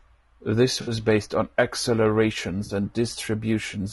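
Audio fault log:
throughout, low-delay AAC compression: the speech sounds rough and grainy, with noise between harmonics and a thin top band, likely from low-delay AAC coding at a bitrate that fits about 32 kbps.
0.81–0.91 s and 2.65–2.71 s, AAC frame loss with concealment: brief smeared, noisy patches, the first just before "based on the". The decoder filled about 60 ms and 40 ms of lost frames from earlier spectrum.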